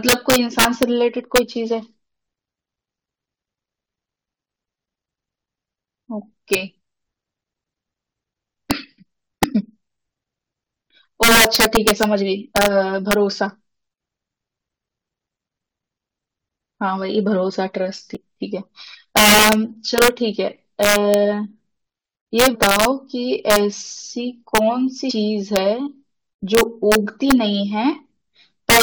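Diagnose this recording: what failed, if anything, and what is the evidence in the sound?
The fault is damaged data in a compressed stream, at the codec decoding stage. Three short disturbances break into the speech at 18.15–18.17 s, 22.54–22.56 s and 25.09–25.11 s, each about 20 ms long. Corrupted bytes made the decoder misread those frames and produce garbled output until it found the next valid frame header. A buffer underrun would leave a silent gap, and an analogue click would be a single sharp tick.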